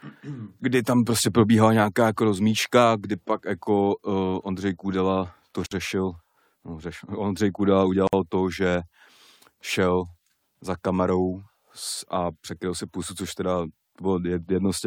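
Gap at a join of encoded pieces in this speech clip, at 5.66 s (about 52 ms, before "řešil no řešil") and 8.07 s (about 56 ms, before "to že"): separately encoded segments kept their start delay and end padding, leaving brief silences before the speech resumes.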